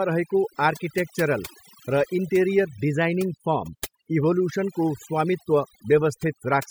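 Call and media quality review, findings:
Quiet parts of the speech lost for the whole clip; background dropped and broken up into twinkling specks. Probable component: noise suppressor, overdone noise removal. Mechanism: per-band attenuation set too aggressive, driving bands near the noise estimate down or off, so low-level speech detail is cut along with the noise and isolated residual bins flicker through.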